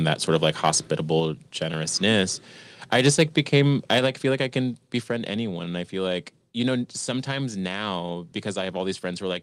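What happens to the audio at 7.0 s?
Nothing goes wrong at 7.0 s; the speech runs on intact through that moment.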